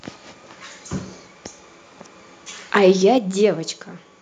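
Speech, with a brief harsh, crackling edge between 2.88 and 2.91 s, where the loudest peak is flattened at the converter's limit. The likely cause is microphone overload: input gain set high enough that the converter clips, here by about 1 dB, with something like 5 percent of samples cut off. At 3.18 s the voice and background drop together by about 6 dB in a single step, just after that distorted peak. This is likely the microphone volume being stepped down by call software reacting to the clipping and lowering the device input gain at once.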